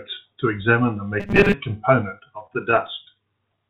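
Robotic sound from repeated short buffers appears from 1.20 to 1.54 s. Across roughly two-thirds or more of that stretch, the speech takes on a rigid, metallic buzz at 200 Hz that only loosely tracks the words. The likely cause is audio arriving too seldom, with the receiver looping the last short buffer to fill the wait. A 200 Hz buzz fits a repeated slice about 5 ms long, while the real audio in between is skipped.

Repeated stalls (stutter) follow from 2.40 to 3.17 s. Packets reached the receiver late, so the jitter buffer kept running dry. Each time, it stretched the last sound until fresh audio came in. Eight short holds, none longer than 25 ms, add about 89 ms of filler, roughly 12% of the span. Nothing is lost, but the speech drags and catches. Throughout, the band-limited sound with nothing above 4 kHz points to a G.711 mu-law call path at 64 kbps.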